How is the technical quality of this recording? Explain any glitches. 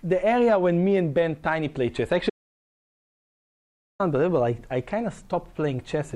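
One glitch stands out. From 2.30 to 4.00 s there is an audio dropout to silence: about 1.7 s vanishes into silence, likely from a lost input while recording continued. Unlike a natural pause, even the background hiss disappears, and the sound cuts off and resumes abruptly.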